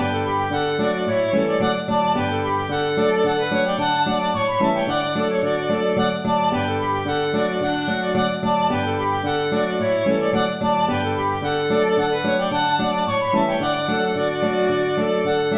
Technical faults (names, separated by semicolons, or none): none